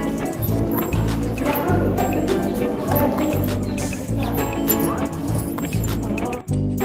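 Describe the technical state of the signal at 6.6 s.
At 6.6 s the signal is intact, with no audible fault at that point.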